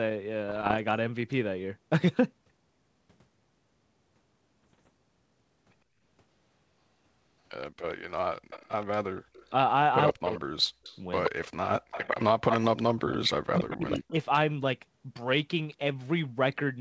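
Speech over a wideband call, with bit errors on an ADPCM link at 0.48 to 0.77 s and 4.63 to 4.89 s. These sound like pops and rough bursts with brief level jumps. Each flipped bit knocks the decoder's step size and predictor off, so the damage rings on briefly. The error rate is around 1 percent in the first burst and about half a percent in the second. An echo leak follows, likely from a far-end speakerphone whose echo canceller let sound through. A copy delayed by 123 ms appears at 7.61 to 7.94 s, 8.5 to 9.49 s, 10.09 to 12.58 s, 13.11 to 13.16 s and 13.72 to 14.1 s. It sits about 25, 20, 5, 20 and 15 dB below the speech. Speech is also suppressed in double talk at 8.98 to 9.27 s, 10.12 to 10.84 s and 12.29 to 14.13 s. The voice dips by up to about 40 dB and cuts out in pieces. The likely cause is a canceller muting both sides when they overlap.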